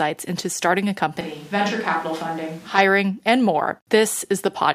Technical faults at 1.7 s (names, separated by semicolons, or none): switch to a distant microphone